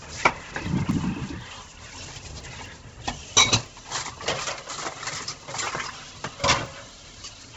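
From start to finish the sound is band-limited and coarse, most likely from Bluetooth LC3 compression. Nothing reaches above 7.8 kHz, and what remains near the top has a breathy, grainy texture, because the encoder discards much of the upper spectrum and fills it with noise. The heavy damage points to a bitrate around 16 kbps with 10 ms frames. On a spectrogram this shows as a hard ceiling at 7.8 kHz with speckled, smeared energy just beneath it.

From 0.16 s to 7.41 s, periodic USB or driver dropouts repeat every 0.25 s, about thirty in all. Each time, the audio path stalls and a tiny slice, roughly half a millisecond, is replaced by silence. The result is a steady, clock-like ticking that is audible only where the sound has energy. A waveform shows evenly spaced brief notches, and a spectrogram shows thin vertical broadband lines at each gap.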